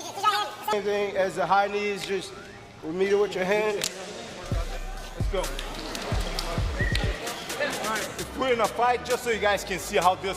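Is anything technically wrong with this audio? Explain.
Yes. From 0.0 to 0.73 s the sound runs at double speed, an octave high: the audio is read two samples at a time.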